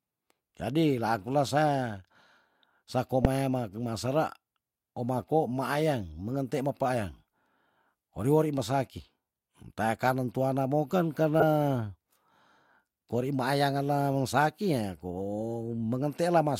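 Damaged compressed frames reached the decoder with flipped bits, and each was played as a corrupt frame decoded, with misread gains and codes putting energy at wrong frequencies. At 3.22–3.25 s, spanning a few frames, this gives a loud blip. A faint squeak follows at 7.14 s, then a moderate one at 8.58 s. Right after "tuana moken", at 11.40–11.43 s, a single bad frame bursts loudly.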